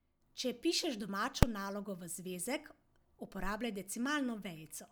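A single sharp bang at 1.43 s, just before "nalogo v zvezek uporabljaj", is invalid numbers at full scale: a calculation went infinite, pinning output at maximum for one short block, consistent with 128 samples.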